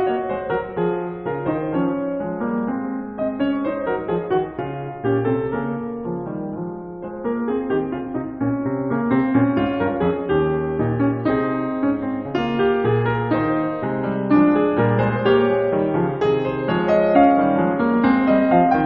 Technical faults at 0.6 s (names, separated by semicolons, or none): none